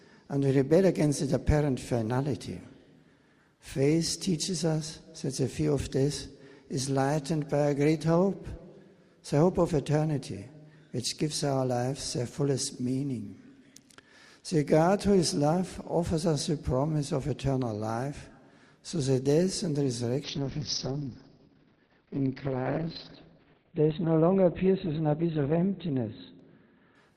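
A call bitrate drop starts at 20.24 s and lasts to the end of the audio. The encoder codes far more coarsely and cuts the bandwidth from 20 kHz to 4 kHz, leaving a rough, muffled sound, which fits a fall from about 48 kbps to 7 kbps.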